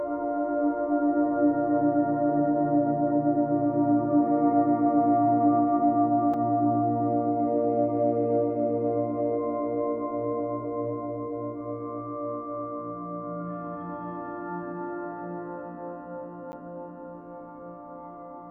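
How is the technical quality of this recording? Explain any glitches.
Two short dropouts mar the recording, both blocks of digital silence. At 6.34 s a 4 ms run of samples drops to silence, and at 16.52 s a 10 ms run does the same. The audio cuts out and back abruptly with no fade, the kind of gap left when output samples aren't delivered in time. Each is heard as a tick or dip. On a waveform each appears as a flat line. On a spectrogram each is a narrow empty vertical gap.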